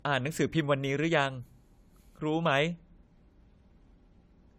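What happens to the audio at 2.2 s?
At 2.2 s you're hearing generation loss, and it runs through the whole clip rather than just that moment. The speech sounds swirly, hollow and smeared, with blurred consonant attacks. That fits AAC-LC at 64 kbit/s, likely re-encoded about three times, each pass adding fresh quantisation noise on a shifted frame grid.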